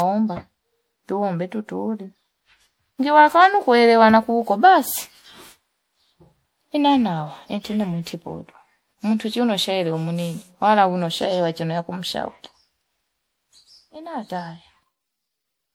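Generation loss runs through the whole speech recording. It sounds swirly, smeared and hollow, and attacks blur. Each lossy pass requantised on a shifted frame grid, so damage piled up. The likely cause is MP3 encoding repeated about five times, fitting 96 kbit/s.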